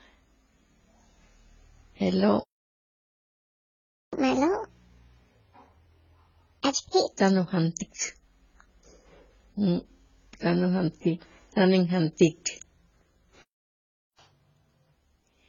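Throughout the speech, nothing is heard above 7 kHz, and smeared, warbly artefacts from two codecs sit together, likely from transcoding between lossy codecs, AAC-LC at 16 kbit/s re-encoded as HE-AAC at 40 kbit/s. A playback stall silences the audio from 2.40 to 4.13 s, about 1.7 s, likely because the player ran out of data. Catch-up at higher speed follows: from 4.13 to 7.13 s, starting on "tan ujantik", it plays at 1.5 times speed, raising pitch by roughly seven semitones, then returns to normal. A second stall cuts the sound from 13.42 to 14.19 s, about 0.77 s. A 2x catch-up then runs from 14.19 to 14.95 s, about ten semitones sharp.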